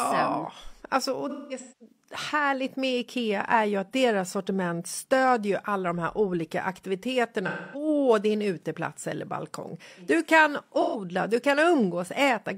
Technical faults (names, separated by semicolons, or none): AAC frame loss with concealment